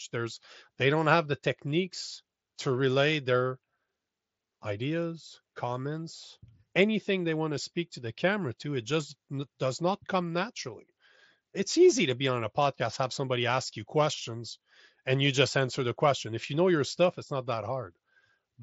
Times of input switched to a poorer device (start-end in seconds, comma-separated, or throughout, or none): none